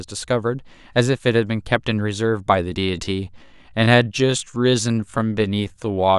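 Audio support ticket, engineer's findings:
Time-stretched section from 2.76 s to the end: speech drops to about 0.71× pace with pitch unchanged, so it drags. Likely a stretch-to-fit step in the editing or sync software, padding length by repeating short slices of the audio.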